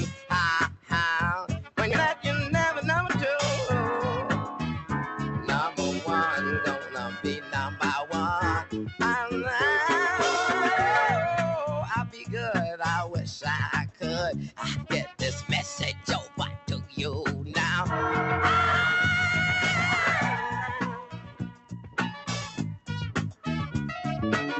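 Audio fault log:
Throughout: noise suppressor applied to music or sounds. A speech-tuned suppressor keeps treating sustained material as noise, so the level pumps by roughly 5 dB as held sounds sink and attacks pass.
0.05–0.31 s, 0.68–0.92 s, 6.81–7.55 s, 8.62–9.01 s, 12.09–12.28 s, 14.83–15.21 s, 15.93–16.69 s, 20.98–21.98 s: sound cut by the noise suppressor. Steady or decaying passages are misread as noise and pulled down by about 9 to 11 dB. The longest dip runs about a second near 21 s.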